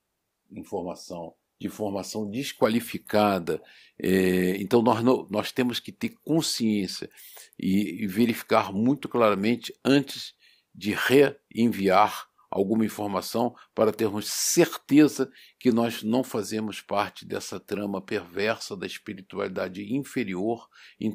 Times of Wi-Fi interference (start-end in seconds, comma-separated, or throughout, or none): none